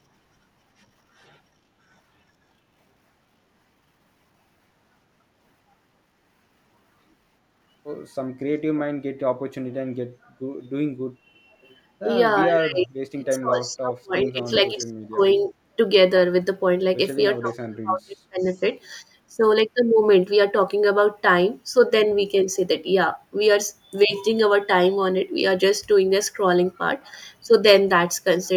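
At 10.65 to 10.69 s and again at 11.63 to 11.76 s, a faint echo leak appears. A delayed copy of the speech returns 406 ms late. It sits roughly 40 dB and 35 dB below the voice, and is brief. The likely cause is a loudspeaker echo canceller letting residue through.

From 12.47 to 15.2 s comes speech suppressed in double talk. The voice dips in pieces, about 2 s in total, by up to roughly 25 dB. The likely cause is the canceller clamping its own talker along with the loudspeaker echo while both sides speak.

From 17.38 to 18.62 s the suppression returns and is deeper, roughly 35 dB, over about 1 s. Inside it, at 18.41 to 18.45 s, the same 406 ms echo slips through, about 40 dB down.

Short dips follow at 19.29 to 19.4 s and at 27.43 to 27.54 s. Each lasts about 0.1 s. They are shallower, roughly 15 dB and 10 dB.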